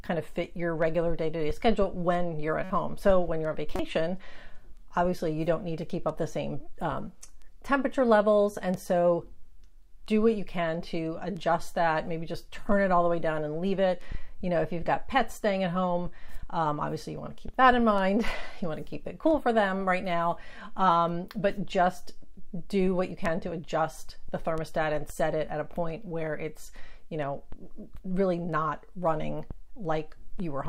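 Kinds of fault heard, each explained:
Corrupt frame decoded: bits inside compressed frames were flipped in storage or transit, and the decoder played the damaged frames instead of discarding or concealing them, so misread gains and codes put energy at the wrong frequencies. Two brief bursts result: a quieter one from 2.64 to 2.71 s, around -25 dBFS, pointing to a couple of frames, then a louder one at 3.76 to 3.80 s, peaking roughly -15 dBFS, suggesting a few frames hit.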